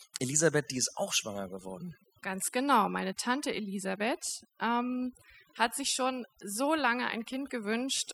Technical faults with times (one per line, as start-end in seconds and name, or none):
0.00-8.13 overdone noise removal